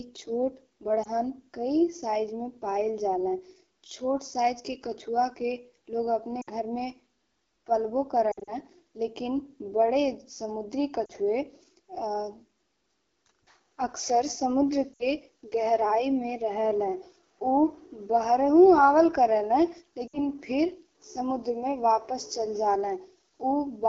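Throughout, the speech carries the rough, raspy texture of the AMR wideband (HD Voice) codec running at 8.85 kbit/s, one of its two lowest rates. At that rate the pulse model driving the vocal tract filter cannot follow the voice closely, so voiced sounds turn gritty and the top band is filled with shaped noise. This roughness is steady, which separates it from broadband background noise or a momentary glitch.

Lost AMR speech frames interrupt this at 1.03 s, 6.41 s, 8.31 to 8.52 s, 11.05 s, 14.93 s and 20.08 s. The decoder bridges each gap by repeating the last good pitch and vocal tract settings at falling gain. The single 20 ms loss near 1.03 s is a brief warble. The 40 to 60 ms losses smear and sag before the voice returns thin. Near 8.3 s, about 120 ms of loss scattered over 160 ms causes repeated dips. Unlike a packet dropout, the sound fades and slurs rather than cutting to hard silence.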